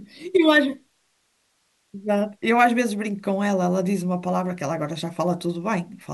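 Listening to the speech recording, nothing stood out as a technical problem.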